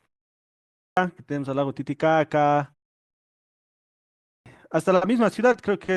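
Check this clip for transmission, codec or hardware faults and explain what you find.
A clipped start after a pause occurs twice. At 0.38 s, after about 0.38 s of silence, the speech jumps in abruptly at 0.97 s, missing roughly 590 ms of its opening. At 3.82 s, following a 0.91 s pause, it again bursts in mid-sound at 4.46 s, about 640 ms short. The playback device drops into a low-power state during silence and needs that long to wake and resynchronise, so the first sounds after each pause never reach the output.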